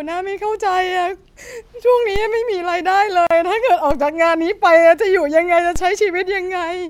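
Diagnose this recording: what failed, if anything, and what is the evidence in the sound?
At the converter, the zero line of the waveform jumps three times, at 2.16 s, 3.91 s and 5.76 s, and each DC step lands as a short low thump while the speech carries on unchanged. Each offset then decays rather than holding, drained by a high-pass around 5 Hz. That fits a converter recalibrating or an offset input switching in. Unlike a dropout or a digital click, nothing is missing from the speech, and the thump's energy sits very low.

At the codec, between 3.27 s and 3.31 s, a gap of 37.5 ms opens at a join of encoded pieces, cutting through continuous speech with edges that the codec smears. The speech resumes exactly where it stopped. Separately encoded pieces were joined without trimming, so the encoder's start-up delay and final-frame padding stayed in as silence. Network packet loss would differ: it drops or conceals material, whereas here nothing is lost.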